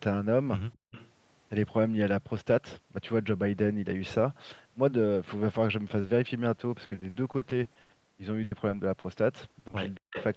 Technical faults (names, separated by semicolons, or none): echo leak; background gated by the echo canceller; short concealed packet loss; repeated packet loss (robotic sound); burst of packet loss; speech suppressed in double talk